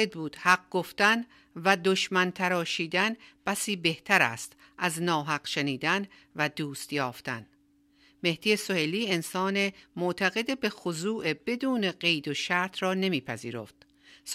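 Nothing in this speech recording stood out as a technical problem on listening.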